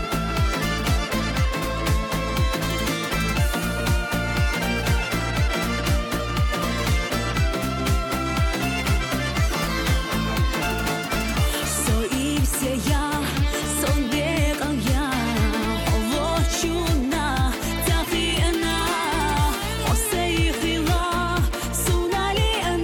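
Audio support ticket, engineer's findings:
No faults found on listening; no dropouts, clipping, glitches or level problems identified across the clip.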